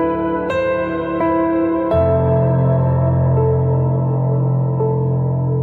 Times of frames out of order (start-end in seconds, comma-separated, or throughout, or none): none